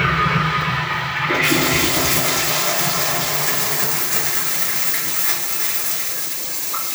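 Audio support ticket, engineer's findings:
Doubled audio track throughout. Full-band copy trails each event by around 300 ms, about 5 dB quieter, with no decay or room colour. Waveform shows every transient repeated once at that fixed offset; spectrogram shows duplicate vertical stripes. Likely a second, slower capture path mixed in.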